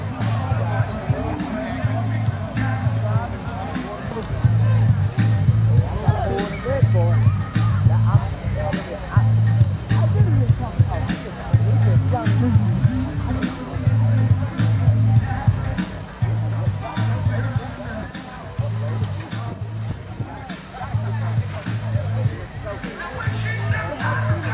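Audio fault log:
No faults detected at any point in the clip.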